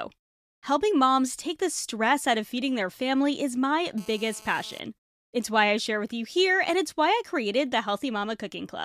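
Just after "their family is my", from 3.98 to 4.80 s, a hard, raspy 217 Hz buzz thick with harmonics appears, about 23 dB below the speech. This is GSM phone buzz: a nearby 2G phone's data burst, its pulsed transmissions rectified by the audio circuitry.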